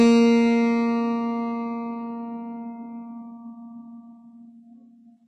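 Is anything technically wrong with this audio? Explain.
Yes. Throughout the music there is heavy damage from likely HE-AAC compression. Only the lower spectrum is truly coded. The treble is rebuilt by copying lower bands upward, so it sounds gritty and metallic, with nothing above 11 kHz. This fits a very low bitrate, around 12 kbps.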